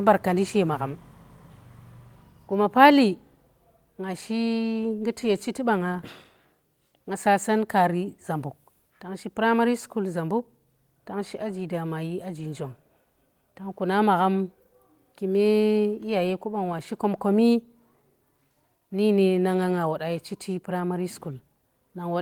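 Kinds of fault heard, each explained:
No technical faults can be heard in this recording.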